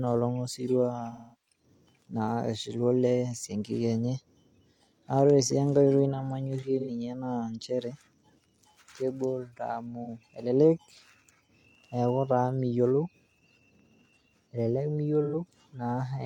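Speech with brief smeared, noisy patches at 1.12–1.60 s, 6.79–6.90 s, 10.04–10.07 s and 15.24–15.36 s, from AAC frame loss with concealment, where the decoder rebuilt missing frames from the last good spectrum.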